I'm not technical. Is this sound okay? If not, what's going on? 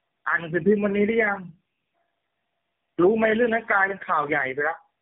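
No. Throughout the clip there is tandem speech coding. The speech passed through three phone-network speech compressors in a row, each squeezing an already damaged copy. That builds up roughness, a warbly edge and a muffled tone, with nothing above 3.5 kHz.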